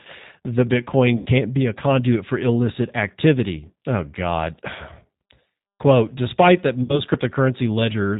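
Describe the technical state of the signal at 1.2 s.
From 1.18 to 1.28 s the speech is stretched out and fades, then sounds weak and distorted as it recovers into "be a conduit for". This is VoIP packet loss concealed by the speech codec. Roughly 80 ms of audio went missing, which fits four lost 20 ms packets. The decoder kept extending its last pitch and vocal-tract filter at falling gain, and because each frame builds on the previous one, recovery lags.

Underneath, the speech has a plainly rough, synthetic quality with no content above 4 kHz. This points to the G.729 codec at 8 kbit/s, which resynthesises speech in 10 ms frames from a filter, a pitch predictor and a few pulses.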